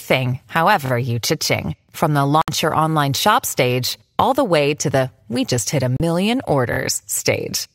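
At 0.86 to 0.91 s, fresh audio reached the playback device late, so it replayed its last buffer twice more. That makes a repeated buffer: a 23 ms slice of the speech sounds three times with hard joins, a quick buzzy stutter that fits a 1024-sample buffer. From 2.42 to 2.48 s, just before "your online shop stage", the receiver lost the stream and muted in a digital broadcast dropout, leaving a 64 ms silent hole, which points to two lost frames. A second dropout follows "we just hit a" at 5.97 to 6.00 s, a 32 ms gap consistent with one frame. At 6.73 to 6.78 s the same late buffer repeats twice again, giving another short stutter.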